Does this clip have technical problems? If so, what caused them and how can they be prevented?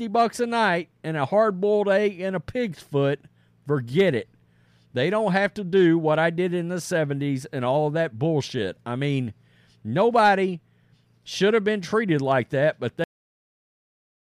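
Yes. A cut-off end hits at 13.04 s: the final buffers were never written, so the speech stops mid-sound and drops straight into digital silence with no natural decay. To prevent it, flush and close the recording or export buffers completely before stopping the device or finalising the file.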